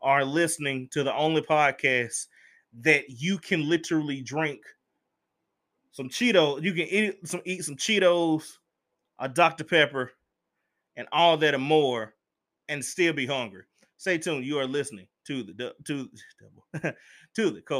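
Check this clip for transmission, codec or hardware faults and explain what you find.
Nothing wrong turned up anywhere in this speech clip.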